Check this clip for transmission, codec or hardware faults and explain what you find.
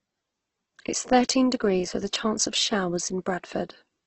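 One codec fault runs through the whole speech clip: Opus compression. From start to finish the sound is rough and grainy, with nothing above 8.2 kHz. That matches Opus's music (CELT) mode, which is likely working at a very low rate, around 12 kbps. The encoder keeps each band's energy but, short of bits, refills band detail with folded or noise-like content. That turns the speech noisy and gritty instead of swirly. On a spectrogram, energy stops sharply at 8.2 kHz, and the bands below look smeared and noisy rather than showing clean harmonics.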